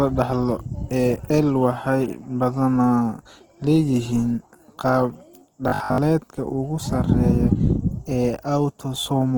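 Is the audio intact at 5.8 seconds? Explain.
No. From 5.68 to 5.98 s the speech takes on a robotic sound from repeated short buffers: a rigid, metallic 50 Hz buzz that only loosely tracks the speech. The likely cause is audio arriving too seldom, so the playback fills the gaps by repeating a 20 ms slice while most of the real signal, roughly two thirds or more, is skipped. On a waveform the stretch shows an identical shape recurring every 20 ms. A spectrogram shows evenly spaced horizontal harmonics at multiples of 50 Hz replacing the natural pitch contour.

Underneath this, and throughout the clip, Opus compression is plainly audible. The speech sounds noisy, rough and grainy rather than swirly, likely from Opus in its music (CELT) mode at 16 kbps. That mode preserves each band's energy but fills bands it cannot afford bits for with folded or noise-like content. The bandwidth stays full. 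On a spectrogram the upper bands look smeared and speckled instead of showing clean harmonic detail.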